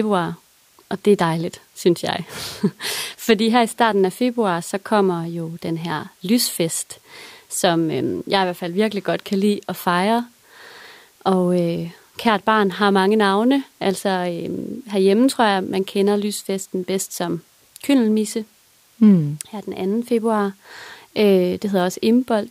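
The speech recording holds a steady, continuous signal throughout, with nothing in it that departs from normal playback.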